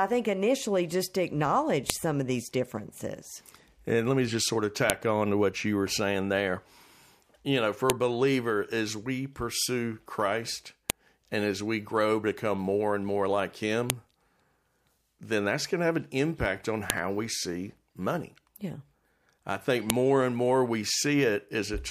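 Separate WAV pieces, about 3 s each, were joined without stripping their headers, so the header bytes play as samples: a file header played as audio. Each joint gives a sharp, loud click in the speech, at 1.90, 4.90, 7.90, 10.90, 13.90, 16.90 and 19.90 s.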